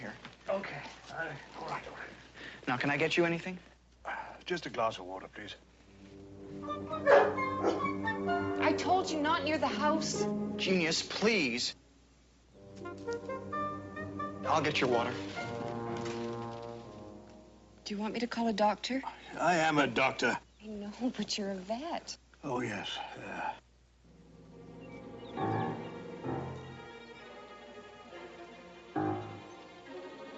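No technical faults are audible.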